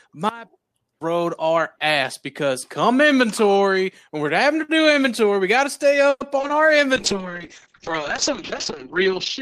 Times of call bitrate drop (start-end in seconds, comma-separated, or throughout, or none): 6.97-9.42